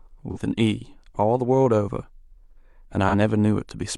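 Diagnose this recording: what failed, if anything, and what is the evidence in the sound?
The fault is in the codec stage: AAC frame loss with concealment, at 0.31 to 0.38 s and again at 3.08 to 3.15 s in this speech clip. Each gap fits a single lost frame of roughly 43 ms. The decoder patches it from the last good spectrum, so the sound turns briefly smeared and noisy. On a spectrogram the harmonic lines blur into a diffuse block with soft edges, and the waveform shows a short stretch of noise-like texture.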